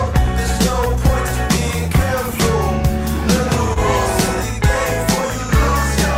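Short concealed packet loss at 3.73–3.78 s: 20 ms never arrived in time, so the decoder stretched the preceding sound over the gap, leaving a brief smear.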